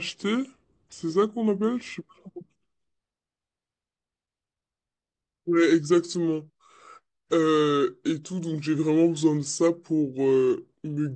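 Throughout, the speech is played back at the wrong sample rate, likely around 22 kHz instead of 32 kHz, slowing it to 0.69 times speed and dropping pitch about 6.5 semitones, low and sluggish.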